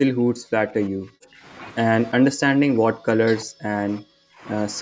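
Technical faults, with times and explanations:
0.00–1.45 s, speech suppressed in double talk: the speech dips by up to about 40 dB and breaks up, likely because the echo canceller could not separate near-end speech from the overlapping far-end echo and turned both down.
2.15–4.43 s, speech suppressed in double talk: the speech again fades and drops out by up to about 40 dB, likely from the canceller attenuating near-end speech during simultaneous talk.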